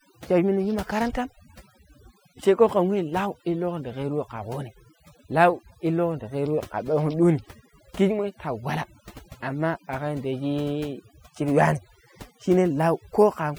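Throughout the speech, the background collapses into near silence dotted with twinkling, chirpy specks, while the quieter details of the voice are smeared away. That is overdone noise removal: a noise reduction process pushed far too hard on a noisy recording, pulling individual frequency bands down or out whenever they sit close to its noise estimate, so soft parts of the voice vanish along with the noise.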